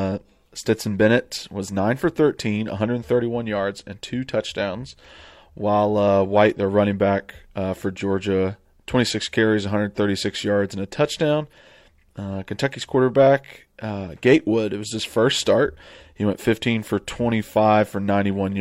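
Listening closely to the speech, nothing stood out as a technical problem at any point.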